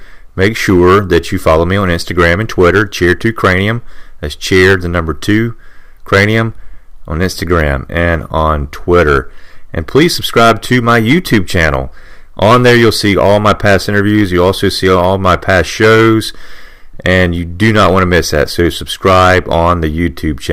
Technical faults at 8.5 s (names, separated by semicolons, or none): hard clipping